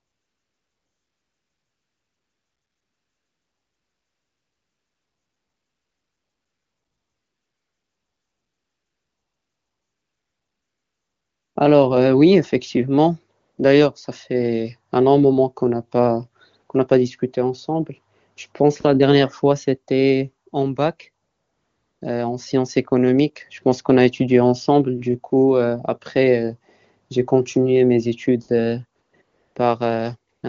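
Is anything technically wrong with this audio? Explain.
Yes. There's AMR comfort noise at 0 to 11.55 s, 13.41 to 13.57 s, 21.25 to 22.01 s, 29.01 to 29.13 s, 29.21 to 29.55 s and 30.33 to 30.43 s. The phone treated those stretches as silence and stopped sending speech, so the receiver filled them with smooth synthetic noise that switches in and out. The wideband HD Voice coding itself sounds clean, which fits a high bitrate.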